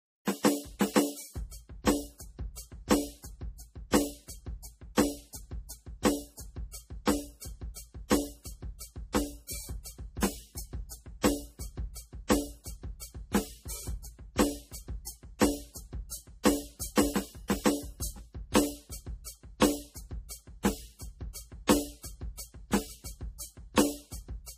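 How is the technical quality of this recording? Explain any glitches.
The music carries plainly audible compression damage from start to finish. Throughout, nothing sounds above 15.2 kHz, and a watery, swirling texture runs under the mix, with smeared attacks. This is likely MP3 compression at a low bitrate, around 40 kbps. Starved of bits, the encoder discards the treble and zeroes quieter frequency lines, which flicker on and off between frames.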